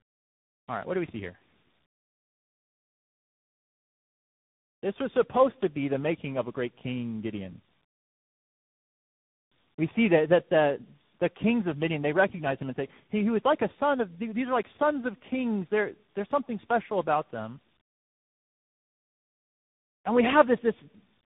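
Tandem speech coding runs throughout. Repeated decoding and re-coding leaves the speech rough, muffled and warbly. Nothing reaches above 3.8 kHz.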